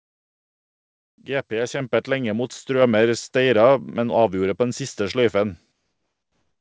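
At 1.8 s a microphone volume step-up raises speech and background together by about 5 dB; the waveform envelope jumps abruptly to a higher level. From 5.72 s to the end, comfort noise likely replaces the real background: a steady, featureless hiss about 4 dB quieter, appearing as a smooth, uniform band on the spectrogram, still capped at 8 kHz by the call codec.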